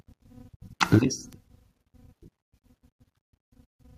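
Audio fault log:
0.82–0.98 s, microphone overload: peaks flatten against the converter ceiling about 5 dB over, clipping roughly one sample in twenty and adding harsh crackle, likely from excessive input gain.
0.96 s, microphone volume stepped down: voice and background drop abruptly by about 2 dB during the distorted stretch, likely automatic gain reduction reacting to the clipping.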